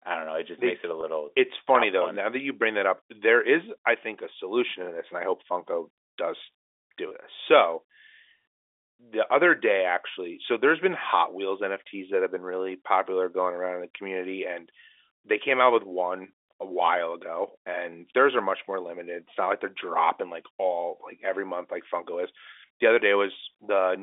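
At 1.01 to 1.03 s, right after "just makes it a", and again at 7.09 to 7.11 s, there is packet loss with pitch repetition. About 20 ms of audio went missing each time, which fits a pair of 10 ms packets, and the receiver filled the hole by repeating the last pitch period. What you hear is a brief held, buzzy smear, not the silent gap or click of a plain dropout. The narrow G.711 telephone band carries it throughout.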